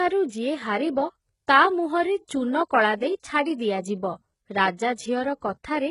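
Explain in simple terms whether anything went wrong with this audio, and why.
Yes, something went wrong for the whole clip: the speech has the sound of heavy HE-AAC compression, likely from a low-quality stream. The codec rebuilt the treble by copying lower sounds upward, so s sounds turn gritty and lispy, and nothing remains above about 11 kHz.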